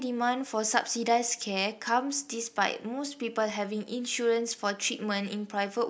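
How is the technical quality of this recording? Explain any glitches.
One glitch stands out in this speech recording. At 3.50 s there is a bit error spike. A single flipped bit in stored or transmitted data pushed about three consecutive samples off by a power of two, then they snapped back. It sounds like one brief, sharp tick, peaking around -30 dBFS, with broadband content unrelated to the speech.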